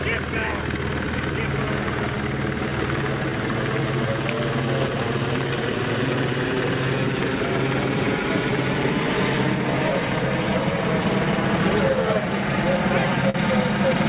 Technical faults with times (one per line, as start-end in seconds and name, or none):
0.00-14.08 clock drift between sender and receiver
0.48-13.06 repeated timing corrections
13.30-13.37 short stall from a late packet